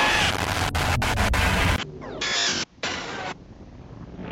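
At 1.76 s the sound drops out for about 20 ms. Then it returns duller and somewhat quieter, with nothing above 7.6 kHz and a new background noise well under the signal. This likely marks an input switched to a poorer device, which holds to the end.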